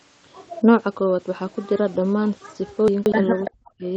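From 2.88 to 3.12 s the stream's chunks were reassembled in the wrong order. The audio appears to move in blocks of about 60 ms, and one block arrived three chunks late, so it plays after material that should have followed it. Nothing is missing, but the passage sounds scrambled for a quarter of a second. There are hard joins where the misplaced block is spliced in.

At 3.45 to 3.51 s an echo leak is heard. It was likely caused by the far end playing the call on a loudspeaker while its echo canceller failed to remove all of that sound from its microphone. The residue returned down the line as a brief copy of the earlier sound. It is delayed by about 333 ms and sits about 10 dB below the main level.

Immediately afterwards, from 3.52 to 3.87 s, the sound is suppressed in double talk. With both sides active, the canceller likely could not tell the local talker apart from the loudspeaker echo, so it attenuated everything. 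For roughly 300 ms the audio dips, falling by around 40 dB at its deepest. Over the whole clip, content above 8 kHz is absent, consistent with the call's band limit.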